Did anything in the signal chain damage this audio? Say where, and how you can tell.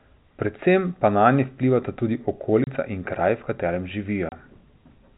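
Yes, packet loss filled with silence on the network path: 30 ms holes at 2.64–2.67 s, between "pa nanje vplivata tudi" and "in kraj v katerem", and at 4.29–4.32 s, after "in kraj v katerem". Each fits one lost packet. Hard edges show silence was inserted, not concealment, which would smear the gap. The 4 kHz G.711 ceiling stays audible throughout.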